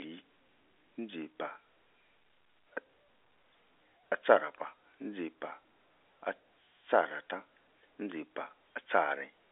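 Nothing stood out on listening to the speech, which comes over a normal telephone line band with no content above about 3.7 kHz.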